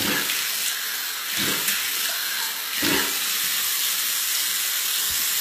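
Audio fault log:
Throughout, HE-AAC compression: the treble sounds bright yet gritty, with a metallic sheen on hiss-like and sharp parts of the sound that doesn't match the body beneath it, and nothing above about 14.9 kHz. Unlike a plain low-pass, the top isn't dull. It is likely rebuilt by spectral band replication, copying lower bands upward, so harmonics misalign across the crossover. The plainly audible damage fits a bitrate around 20 kbps.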